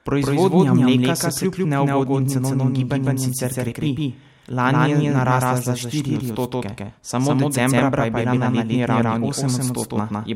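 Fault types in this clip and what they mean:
Doubled audio track: the speech runs twice the whole way through, a second full-band copy trailing by around 150 ms at about the same level, dry with no room tail. It's likely a second capture path or a misaligned edit layering the copies.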